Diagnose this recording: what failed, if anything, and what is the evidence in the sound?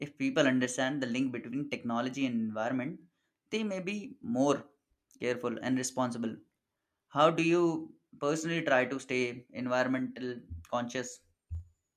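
Nothing failed; no faults heard.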